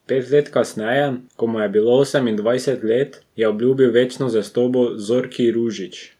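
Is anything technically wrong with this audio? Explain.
No, nothing technically wrong can be heard in this speech recording; the signal stays intact and steady throughout.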